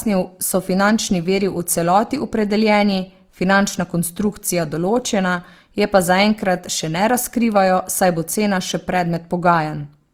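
Throughout the speech, Opus compression damage is plainly audible. The likely cause is Opus in its music mode at a low rate, near 24 kbps. Bands short of bits are filled with folded or noisy content, so tones sound rough and grainy. Bandwidth stays wide, reaching about 20.4 kHz.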